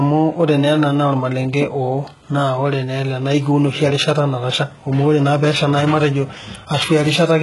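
Throughout this speech clip, one stage in the chain writes longer blocks than the next stage reads, so the tail of every block is discarded. This block size mismatch (truncated) puts a steady buzz at about 46.9 Hz across the whole recording, which fits blocks of 1024 samples being cut off at each boundary. The speed is unchanged, so the discarded portion is very small and the chopping is heard mainly as the buzz.

The speech also shows heavy codec damage, with nothing above 11.4 kHz and a treble that sounds rebuilt rather than captured. The likely cause is HE-AAC compression at a very low bitrate, around 12 kbps. That codec keeps only the lower spectrum and fills in the top by copying lower bands upward under a coarse envelope. Here that leaves s sounds gritty and metallic, with harmonics that fail to line up where the copied treble begins.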